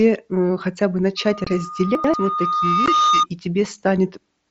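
Right after "э хотя бы", at 1.17 s, a loudspeaker feedback squeal starts: the mic is hearing its own speaker, and a 1.2 kHz tone swells over a couple of seconds to sit a few dB above the speech before it cuts off at 3.26 s. Underneath it there's unconcealed Bluetooth headset packet loss, with a hard-edged 22.5 ms gap from 1.44 to 1.47 s and a 15 ms one at 2.86 s, the kind of hole left when headset packets drop and nothing fills in. The lengths fit a few 7.5 ms packets going missing, and both gaps come through the mSBC link as dropouts. Between 1.95 and 2.14 s there are chunks out of order: a roughly 93 ms block plays one slot late, so the speech briefly jumbles.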